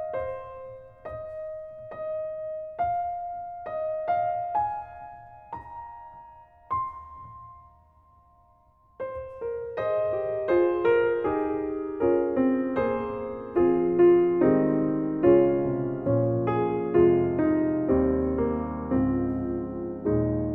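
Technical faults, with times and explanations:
No technical faults can be heard anywhere in this audio. There is nothing here that needs a time or an explanation.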